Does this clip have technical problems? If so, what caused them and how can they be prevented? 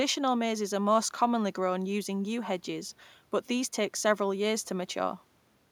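No, nothing in this speech recording stood out as a technical problem on listening, so there is nothing here that calls for prevention.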